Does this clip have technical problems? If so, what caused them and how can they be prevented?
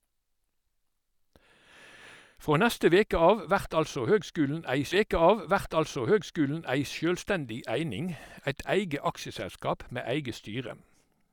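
Yes. At 4.91 s a stream segment repeated: the player fetched or queued the same chunk twice, so the speech jumps back and about 2 s of programme plays again, through 6.91 s, with a small blip at the jump. On a waveform the stretch from 4.91 to 6.91 s closely matches the preceding section, and a spectrogram shows the same pattern twice with a thin vertical click at the seam. Tracking segment sequence numbers and discarding duplicates before playback prevents it.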